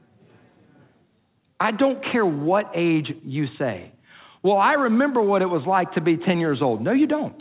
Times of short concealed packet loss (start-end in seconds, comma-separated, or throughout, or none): none